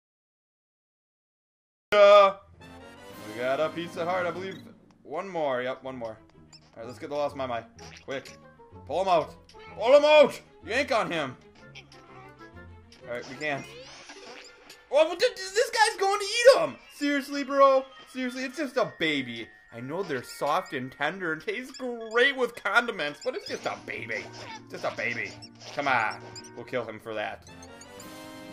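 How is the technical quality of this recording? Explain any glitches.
The recording has one clear fault, at the very beginning.

Cut-off start, from 0.00 to 1.92 s: the clip opens with nearly two seconds of digital silence, and at 1.92 s the audio begins abruptly in the middle of a sound. Capture or streaming evidently started late, so the onset of that sound was never recorded and there is no natural attack. A deliberate fade-in would rise gradually, and a dropout would have audio on both sides of the gap. Here the silence sits at the start and is followed by an instant jump to full level.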